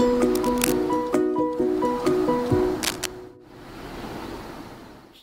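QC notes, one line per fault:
0.35 to 0.80 s and 2.80 to 3.08 s: cable scratch noise. Dense, uneven bursts of scratchy rustle sit over the sound, only about 5 dB below it. This likely comes from a worn cable or connector being moved, so its contact resistance jumps rapidly.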